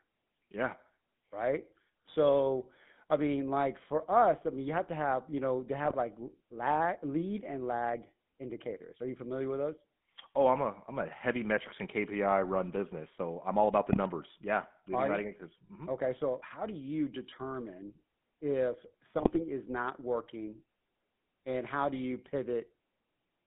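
From start to finish the speech has that GSM full-rate codec character: a buzzy, gravelly roughness, because the codec rebuilds the voice from a vocal-tract model driven by a thinned-out, regularly pulsed excitation rather than the real waveform. The damage is plainly audible. The band runs from roughly 150 Hz up to about 3.5 kHz, so there's no air or sibilant sparkle on top. The overall sound fits the old 13 kbps full-rate coder.

On top of that there are three bursts of GSM bit errors, at 5.84 to 5.95 s, 13.90 to 13.98 s and 19.18 to 19.37 s. Each one sounds like a weak radio link letting corrupted bits through to the decoder. Garbled filter, pitch or gain parameters twist the spectrum or spike the level for four to nine frames, so the voice briefly squawks, pops and gargles. The last burst is the longest, and the error rate during the bursts runs around 1.4 to 2.1 percent.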